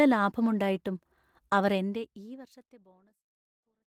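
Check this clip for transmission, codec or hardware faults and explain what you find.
Nothing here points to a transmission, codec or hardware fault: the speech simply eases away in a smooth editor's fade-out from around a second and a half in, with no click or hard edge.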